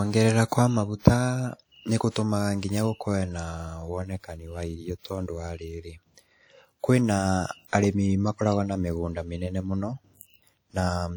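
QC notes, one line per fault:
Throughout: low-bitrate audio saved at a high bitrate. The speech has the smeared, watery quality of a heavily squeezed encode, though the file itself is a generous high-rate MP3 with content reaching up to about 20.1 kHz. The likely cause is an earlier low-rate pass, something like 48 kbit/s WMA, that was later re-encoded. Re-encoding at a high rate keeps whatever damage the first codec did and can't restore the detail it threw away.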